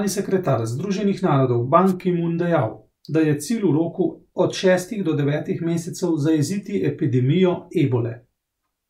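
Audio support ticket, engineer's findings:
Wireless microphone noise hit, 1.86 to 1.93 s, about 75 ms. Short swish of static rising over the speech, then gone. Probable component: analogue FM radio link, mic transmitter to receiver. Mechanism: multipath reflections cancel the carrier, signal fades, receiver noise comes up through the audio. Distinguishing point: a hiss-like burst with soft edges, not a hard gap or repeated fragment as with a digital dropout, and not the thud of handling noise.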